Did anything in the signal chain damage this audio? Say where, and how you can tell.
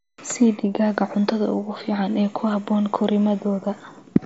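No, the speech arrives intact through the Bluetooth mSBC headset link, and its wideband ceiling and the light graininess on louder passages are the normal signature of that codec, not damage from any stage of the chain.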